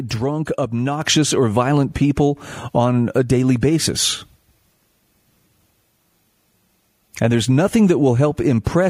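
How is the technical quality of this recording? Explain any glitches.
One glitch stands out: a microphone volume step-up at 1.02 s, just before "or violent people on". The call software judged the input too quiet and raised the device's input volume in a single step of about 5 dB, so voice and background noise jump louder together, instantly.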